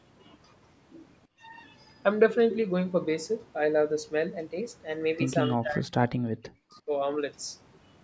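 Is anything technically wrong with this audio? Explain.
Yes. From 4.35 to 5.41 s the speech runs about 5.9% fast and sits about a semitone sharp. This is likely a drift correction step, where clock-matching software briefly altered playback rate. Unlike wow or flutter, the shift holds steady rather than wobbling.

At 5.56 to 6.06 s and 6.42 to 6.91 s the speech is pushed down by roughly 30 and 40 dB. This is speech suppressed in double talk, likely from an echo canceller ducking the talker while the far side spoke. It dips rather than leaving clean packet-loss gaps.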